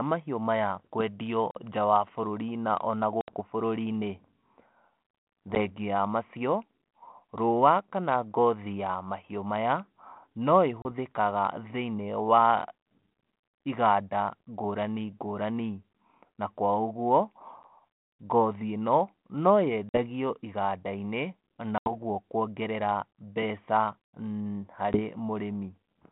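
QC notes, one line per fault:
1.51–3.40 s and 5.55–25.00 s, packet loss on an ADPCM call: hard-edged silent gaps at 1.51–1.58, 3.21–3.40 (after "na ona"), 5.55–5.57 (before "wa macio"), 10.82–10.86, 17.63–17.65 (before "ngothi ĩno"), 19.89–19.99, 21.78–21.91 and 24.93–25.00 s, with between 10 and 80 ms of audio lost each time. Because the decoder's adaptive predictor and step size drift from the sender's while the stream is missing, the sound resumes with brief distortion that settles within tens of milliseconds, heard against the narrow 32 kbit/s G.726 line band.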